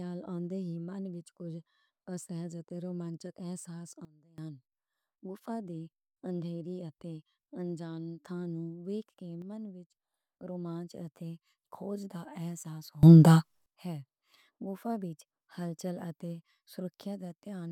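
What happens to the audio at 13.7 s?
Right around there a sudden gain jump is ending. Just after "اتے کھوج دا احساس", from 13.03 to 13.66 s, the level leaps by about 24 dB, speech and background noise together, then drops back. The likely cause is digital gain switched instantly, without any ramp.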